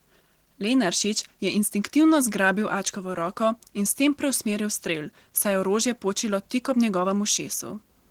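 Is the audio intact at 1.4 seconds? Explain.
No. At 1.4 s, as throughout the clip, the speech sounds hoarse and slightly robotic. This is Opus voice compression in hybrid mode, coding the excitation coarsely at what sounds like roughly 16 kbps.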